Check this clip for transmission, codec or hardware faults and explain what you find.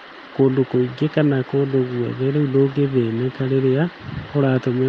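No transmission, codec or hardware faults can be heard in this speech. It has passed through a WebRTC call path, and the top end rolls off at about 12 kHz, which fits Opus working normally at a moderate bitrate.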